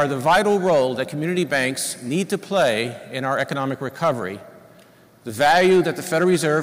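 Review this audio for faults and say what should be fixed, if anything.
Hard clipping runs through the audio at 0.01–1.01 s (about 11 dB over), 1.38–1.68 s and 2.34–2.81 s (about 6 dB), 3.32–3.53 s (about 5 dB), 4.03–4.11 s (about 4 dB) and 5.41–6.58 s (about 10 dB). Peaks exceed what the chain can pass and are sliced flat, giving a harsh fuzz, worst in the first and last sections. The waveform shows squared-off flat tops, and the spectrogram shows broadband harmonic smearing up high. Lower the gain before the converter so peaks keep several decibels of headroom.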